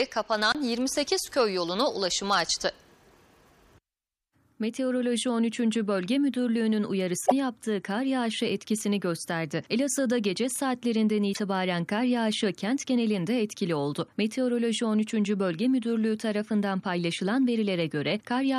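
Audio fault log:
7.25–7.32 s and 11.30–11.37 s, damaged data in a compressed stream: corrupted bytes made the decoder misread frames and lose sync, giving brief 70 ms chirps or squawks.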